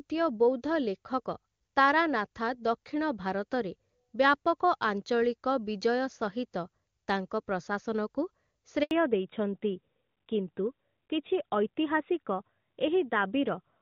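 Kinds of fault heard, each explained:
Handover gap: at 8.83 s the speech cuts out for 80 ms, resuming at 8.91 s, as the call moves between networks and no speech frames arrive during the switch. The sound dies away within tens of milliseconds, and whatever was said then is lost.
Fallback to narrowband: from 8.91 s to the end, the call drops from the HD Voice wideband codec to an older narrowband one, which fits AMR-NB at 12.2 kbit/s. Nothing remains above 4 kHz, so the speech turns duller and rougher.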